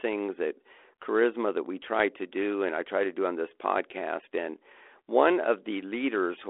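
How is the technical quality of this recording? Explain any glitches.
No faults or glitches heard.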